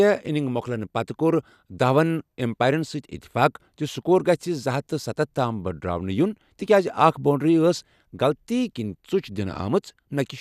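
Listening through the speech recording, nothing technical stood out at any point.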